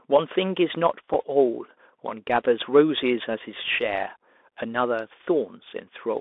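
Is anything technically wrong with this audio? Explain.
Yes, there are two problems. The whole clip has gone through a Bluetooth CVSD headset codec, the narrowband kind you get from headset voice links, which points to a 64 kbps link. CVSD sends one bit per sample saying whether the waveform steps up or down, with an adaptive step size. Here the speech sits in a band from about 250 Hz to 3.6 kHz, so it sounds thin and boxy. The codec damage is plainly audible: s sounds come out scratchy and a granular hiss runs under everything.

On top of that there are two short Bluetooth headset packet repeat events, at 1.14 s and 2.29 s. Each time a couple of voice packets went missing between headset and phone, and the chip decoded the previous packet's bits again to fill the gap. Each gap is about 7.5 ms, which fits two lost 3.75 ms packets. That's a brief event, so each one comes through as a short glitch in the speech.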